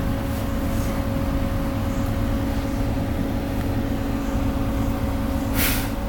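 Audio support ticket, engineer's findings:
Electrical switching spike at 3.61 s: likely a nearby switch, motor or static discharge arcing into the audio line. Heard as a sharp snap or tight cluster of clicks laid over the sound.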